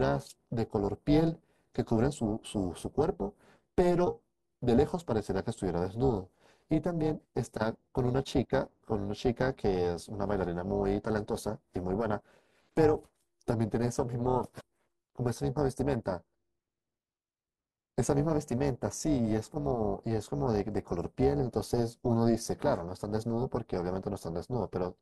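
Overlap-add ripple runs through the whole speech clip: the level swings by about 11 dB at around 300 Hz, giving a metallic buzz with extra tones. The audio was split into windowed frames and rejoined with overlaps that don't sum to constant gain, so loudness pulses once per frame.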